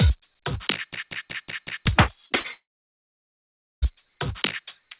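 From 0.93 to 1.86 s a system hang loop repeats one 186 ms piece five times, a machine-gun stutter at about 5.4 Hz that fits an 8192-sample buffer. The waveform shows identical blocks and the spectrogram shows vertical bands, with roughly a second of real audio lost.

At 2.26–2.32 s and 2.40–2.46 s, short concealed packet loss replaces about 40 ms each time with a continuation of the preceding sound. Each gap is heard as a brief smear or wobble, and the spectrogram shows a blurred patch where detail goes missing.

From 2.52 to 3.84 s there is a long gap, likely a network dropout. The concealment briefly extends the last sound as a fading buzz or hiss. Then about 1.2 s of silence shows as a flat line in the waveform and an empty spectrogram column. Above and below that column the spectrogram is already blank beyond 4 kHz, because of the G.711 call codec. The sound then resumes further on.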